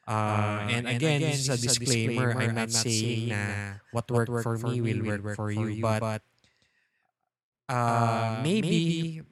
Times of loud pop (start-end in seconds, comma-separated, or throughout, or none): none